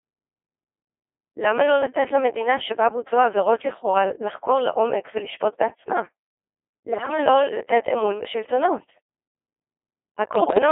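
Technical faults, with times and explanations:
Throughout: Codec 2 vocoder. The speech is rebuilt from pitch, voicing, energy and a spectral envelope at 2.4 kbit/s rather than carried as a waveform, so it sounds robotic and buzzy, with heavy codec damage, confined to a 300 Hz to 3.4 kHz line band.
6.92–7.18 s and 10.36–10.58 s: bit errors on digital voice radio. A high error rate, around one bit in ten, corrupts the frame parameters, so the synthetic speech jumps in pitch, level and tone colour, collapsing into warbles and bleeps for these two short bursts.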